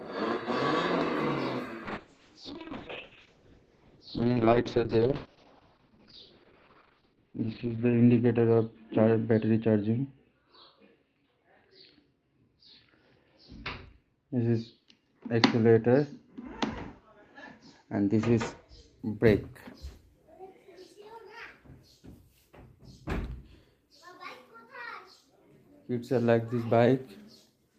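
From 1.87 s to 19.05 s the audio turns rough and watery, and its top end closes in to a muffled ceiling near 6 kHz, worst for a stretch of about 5.9 s before clarity returns. This is a call bitrate drop: the connection's bandwidth estimate fell and the Opus encoder on the call path was told to spend far fewer bits, which fits a fall from 32 kbps to 6 kbps, so it coded coarsely and trimmed high frequencies until the rate recovered.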